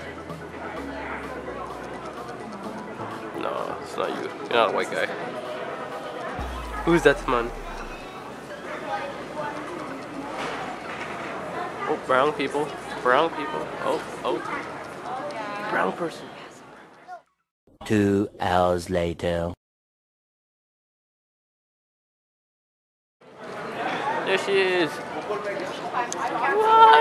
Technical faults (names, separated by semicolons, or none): dropped buffer (overrun)